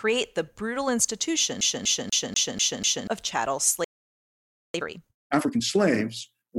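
From 1.61 s to 3.07 s the speech locks into a fast, even stutter: one fragment of about 0.24 s plays six times over, each pass clipped by a brief mute at the jump, before the audio breaks free just ahead of "of chattel". This is the CD stuck on one turn fault. A scratch keeps knocking the laser back one track at the same point of every rotation, so the disc replays that same slice until the pickup gets past it.

Shortly after "of chattel", at 3.84 s, the sound cuts out mid-flow and stays silent for about 0.9 s, until 4.74 s. That is a playback stall. The player most likely ran dry of buffered data or had its thread held up, so nothing reached the output until it recovered and picked up again.

From 4.74 s to 5.62 s the speech then rushes along at twice its normal rate, with pitch unchanged. This is time-compressed catch-up: to clear the backlog left by the stall, the player drops small pieces of audio and cross-fades the remaining ones together, hurrying the flow back into step without raising the pitch.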